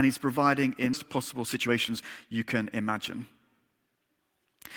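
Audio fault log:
0.93 to 0.95 s, skip ahead: right after "he's providing in" the speech lurches forward, with the two sides of the cut butted together and no silence or fill between them. Roughly a second of talk is simply absent. The stretch was discarded while later audio was already queued, so playback resumed from the newer material and the latency dropped by about a second in one step, leaving an abrupt seam instead of a pause.
1.03 to 3.31 s, jitter buffer speed-up: the talker sounds rushed here, delivering syllables about 14 percent faster than normal while the pitch stays put. The receive buffer was holding more audio than its target, so it trimmed tiny slices, each a pitch period or a few, over and over until around 0.3 s had been shaved off. Tempo rises while pitch does not, which is why it comes across as hurried rather than higher.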